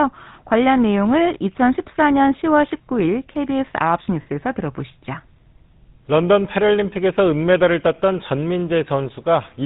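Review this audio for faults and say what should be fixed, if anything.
The GSM full-rate codec colours the whole clip. The damage is plainly audible. It models the vocal tract and drives it with a sparse pulse train that keeps only every third excitation sample. The result is a buzzy, gravelly roughness, and nothing above 4 kHz gets through. The texture fits the 13 kbps full-rate mode. To prevent it, record or transmit through a wideband codec such as AMR-WB or Opus.

The second fault is lost GSM frames, from 4.22 to 4.27 s. The gap is 40 ms, which fits two dropped 20 ms frames. The decoder replaced the missing frames with the last good frame's settings. That produces a short, rough, metallic ring instead of a clean continuation. The gap is brief, so it rings and does not fade to silence. To prevent it, add error protection or retransmission on the link.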